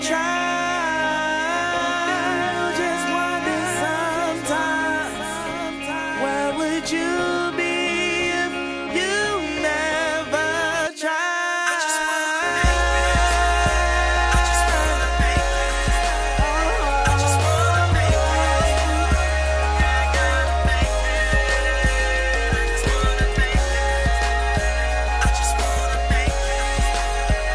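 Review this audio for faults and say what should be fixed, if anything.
Nothing here needs fixing, as no faults turn up anywhere in the recording.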